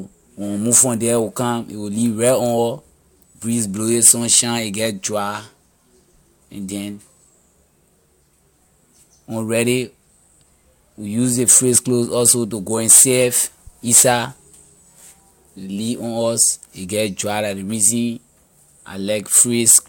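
No audible technical faults.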